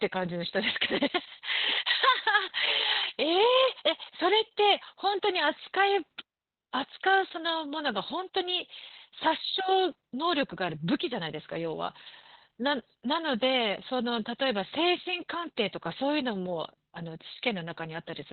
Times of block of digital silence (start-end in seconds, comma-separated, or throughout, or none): none